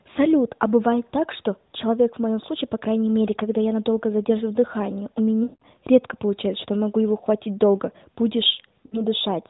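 Lost AMR speech frames occur at 5.44 to 5.63 s and again at 8.86 to 9.02 s. Corrupted frames failed their checks, so the decoder kept repeating the last good pitch and vocal-tract settings while lowering the gain. The first gap lasts 180 ms, which fits nine missing 20 ms frames. The speech smears into a held tone that sinks toward silence before returning briefly weak. The 60 ms second gap gives a shorter drawn-out dip.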